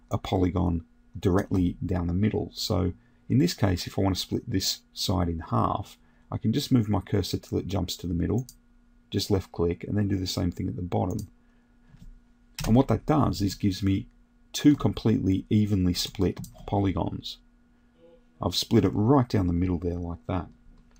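No technical faults are audible.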